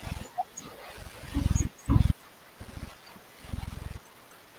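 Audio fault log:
2.11 s: skip ahead. Roughly a second of speech is dropped with no fill, and the two sides are spliced almost directly, so the talker seems to jump forward. This fits a jitter buffer discarding queued audio to cut about a second of latency.
2.21 to 3.24 s and 3.98 to 4.54 s: jitter buffer speed-up. The receiver trims short pitch-period segments repeatedly to drain excess buffered audio. The first run plays about 8% fast, removing roughly a tenth of a second. The second runs about 51% fast, removing roughly 0.3 s, and sounds clearly hurried at unchanged pitch.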